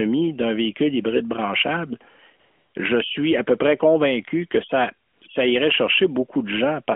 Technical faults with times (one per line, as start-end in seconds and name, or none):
2.40-2.74 AMR comfort noise
5.08-5.22 AMR comfort noise